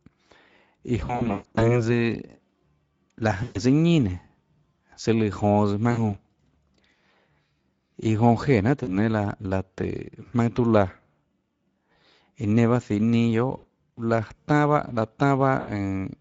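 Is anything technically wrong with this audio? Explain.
Yes, there are two faults. Throughout, the speech has been carried by the Speex codec at a setting that sounds like roughly 17 kbps. At that rate the CELP coder has too few bits to describe the excitation, so the speech comes out noisy and hoarse. The codec damage is plainly audible across all 16 seconds.

The second fault is VoIP packet loss concealed by the speech codec. It occurs at 1.05–1.85, 3.43–3.59, 5.91–6.16, 8.83–8.90, 11.93–11.96, 13.57–13.65 and 15.59–15.70 s. The worst stretch is the first, with about 360 ms of audio missing, scattered over 560 ms, and the longest gap is 140 ms. The later dropouts are 20 to 120 ms long. During each gap the decoder keeps repeating its last pitch and filter with falling gain, so the speech smears into a buzzy or coloured, fading tone. The speech then sounds weak or distorted for a moment after it resumes, because each decoded frame builds on the one before.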